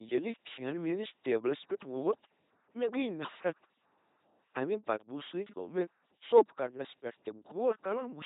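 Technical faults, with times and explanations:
Throughout, LPC-10 vocoder: each moment is rebuilt as pure buzz or pure noise through a small all-pole filter, giving a heavily mechanical robot sound that fits a 2.4 kbit/s vocoder. A spectrogram shows rigid harmonic stripes or flat noise blocks, empty above 3.8 kHz.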